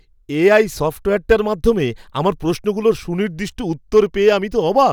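A stage in the chain was driven past its ceiling, by about 4 dB at 1.31 s and about 3 dB from 3.96 to 4.29 s, so hard clipping flattens the speech peaks. The squared-off tops add high harmonics, heard as a brief crackle and then more crackle on the peaks.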